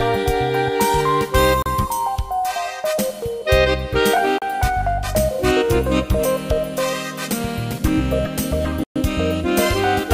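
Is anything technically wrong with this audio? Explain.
Yes. At 1.62 s, 4.38 s and 8.84 s the sound drops to silence for 34 ms, 35 ms and 122 ms, likely a Bluetooth stall: delayed packets emptied the headphone buffer. The gaps are true silence, not crackle or a looped fragment as with concealment.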